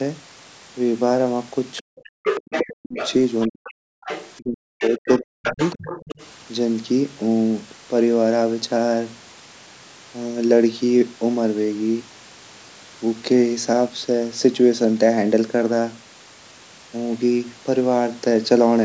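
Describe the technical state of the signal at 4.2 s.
At 4.2 s there's the other side's voice leaking through from 4.03 to 4.33 s, sitting roughly 10 dB under the main speech, likely loudspeaker echo the canceller missed.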